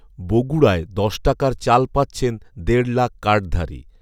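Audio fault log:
No technical faults can be heard anywhere in this speech recording.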